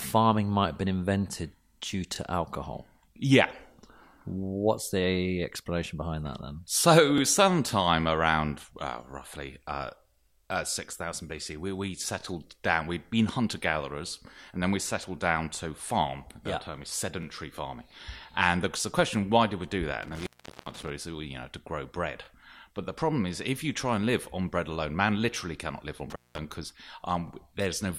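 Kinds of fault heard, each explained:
Overlapping chunks: Each 5 s block starts about 23 ms before the previous one finished, so that sliver repeats, giving a regular stutter near 2.16, 7.18, 12.21, 17.23, 22.25 and 27.28 s. On a waveform, a short duplicated segment and discontinuity appear at each join.
Intermittent contact: A loose connection briefly opens the line, dropping the sound to faint hiss with crackle at either edge, about 0.4 s near 20.03 s and 0.2 s near 26.10 s. A spectrogram shows broadband clicks bracketing a near-empty, low-level noise gap.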